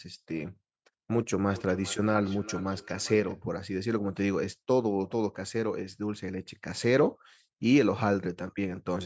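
Speech clip with feedback echo between two devices from 1.49 to 3.43 s. Each word returns at an interval of roughly 400 ms, thinner and more ringing than the original, peaking at about 17 dB below the speech. The pattern points to two devices in the same room on one call. One plays out what the other's microphone sent, that microphone picks it up again, and neither echo canceller removes sound played by the other device. The call's microphone processing leaves nothing above 8 kHz.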